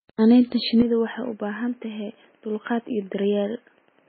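From the first moment, a steady faint ticking runs under the speech at about ten clicks per second, with a spacing of 102.4 ms. This is Wi-Fi interference. A nearby Wi-Fi radio's beacon transmissions are picked up and rectified by the audio circuitry, turning each radio burst into an audible tick. It sits far below the speech, roughly 40 dB down.

Also present throughout, the speech sounds watery and swirly, with smeared consonant onsets and nothing at all above 4.6 kHz. This is heavy MP3 compression, likely at a very low bitrate, in the region of 16 kbps. Starved of bits, the encoder cuts the treble at a fixed point and drops weak spectral components that switch in and out from frame to frame. That produces the warbling texture and the blurred attacks.

At 0.82 s, and lasting to the end, the sound abruptly narrows and turns duller and boxier, with no gap at the transition. This is an input switched to a poorer device, likely a change to a lower-quality microphone or a headset's call profile. 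The bandwidth now stops at 3.3 kHz, and the level drops by about 5 dB. A new background noise floor also appears, roughly 40 dB below the speech.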